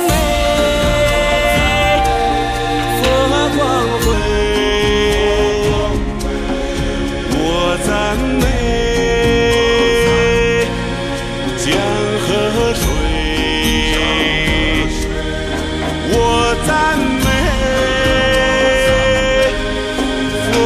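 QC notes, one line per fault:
4.13–20.65 s, section at the wrong speed: playback falls to 0.893x, so pitch sits about two semitones lower and pacing drags, likely from a mismatched playback clock.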